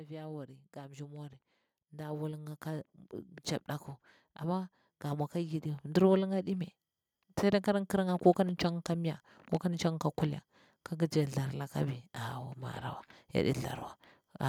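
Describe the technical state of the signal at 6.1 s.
At 6.1 s the automatic gain rising is near its end. From 4.4 to 6.41 s the gain control, judging the input too quiet, lifts level by about 7 dB. Speech and background swell together gradually, unlike a sudden level step.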